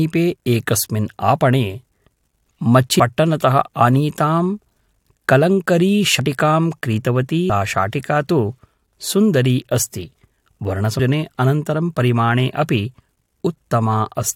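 Compressed frames skipped four times: whole blocks of the encoded speech never reach the output, whether missing from the file or rejected by the decoder as damaged, so playback leaps forward. At 2.99 s roughly 300 ms vanishes, at 6.19 s about 100 ms, at 7.49 s around 200 ms just before "शाटिका तु", and at 10.99 s roughly 300 ms again. Each gap suggests whole frames of about 21 ms were lost, and at each join the speech jumps ahead.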